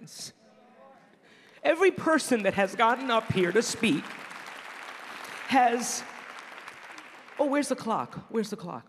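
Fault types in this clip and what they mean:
No faults can be heard anywhere in this clip.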